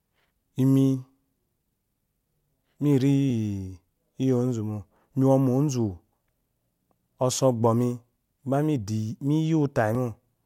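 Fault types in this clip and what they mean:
Clock drift buffer slips: Two devices in the chain are likely running on separate clocks that disagree by a few hundred parts per million, so the buffer between them creeps toward full or empty until a small block of samples, a few dozen at most, is dropped or repeated. In this speech clip that gives a short click roughly every 1.66 s, about seven in all, at a steady spacing from 1.65 s to 9.95 s.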